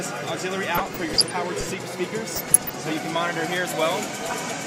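DAB burbling at 0.74 to 1.31 s, 2.36 to 2.76 s and 4.22 to 4.33 s: weak reception lets a fraction-of-a-percent bit errors garble sub-bands into short blips of noise.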